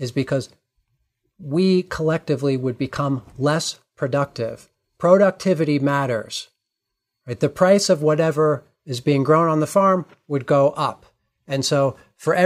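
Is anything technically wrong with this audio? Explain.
No, nothing technically wrong.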